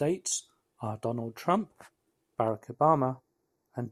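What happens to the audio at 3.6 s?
At 3.6 s you're inside a stretch of channel delay (comb filtering) running from 2.48 s to the end. One channel lags by a fraction of a millisecond, so summing to mono carves notches starting around 3 kHz, leaving the speech hollow and phasey.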